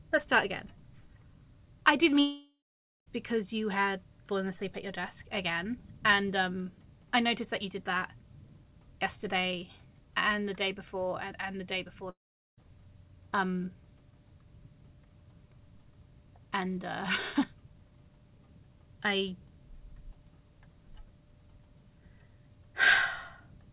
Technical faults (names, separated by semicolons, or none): long network dropout